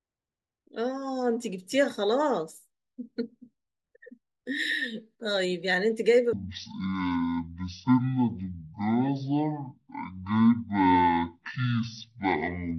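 From 6.33 s to the end, the speech shows a stereo read as mono fault: interleaved left and right samples are treated as one channel, halving playback speed to 0.5x and dropping pitch 12 semitones, with a fainter mirrored copy in the upper spectrum.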